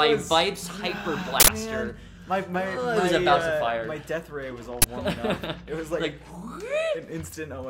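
Two short, harsh bursts of loud digital noise break into the audio, one from 1.40 to 1.48 s and a briefer one from 4.82 to 4.84 s. This is an uninitialised buffer fault: a block was sent for playback before any audio had been written into it, so whatever stale data sat in memory was played as samples. The burst lengths, 80 ms and 20 ms, fit whole blocks of garbage being played out.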